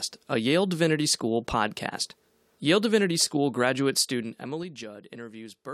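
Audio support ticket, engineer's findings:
Zipper noise, 3.93–4.86 s: ticking rides on the speech as level drops about 15 dB in 3 dB steps, about five a second. Gain stage applying fade per block without smoothing; each hard step clicks. Probable component: level/fader control.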